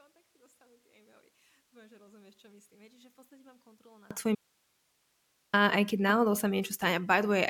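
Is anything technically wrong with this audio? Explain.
Yes, there are two faults.

From 0 to 4.11 s the speech is about 31 dB quieter, likely from one channel inverted, so the centred voice cancels in the mono sum.

From 4.35 to 5.53 s the speech drops out for 1.18 s, leaving only hiss roughly 45 dB down. This is likely an audio dropout to a faint residue, with the signal lost while the path stayed live.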